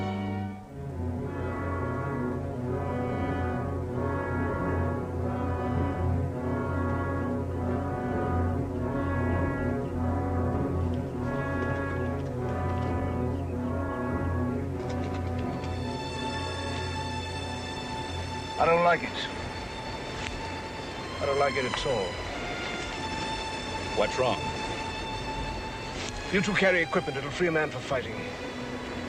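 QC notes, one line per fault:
No faults found. Nothing in the audio calls for a QC entry.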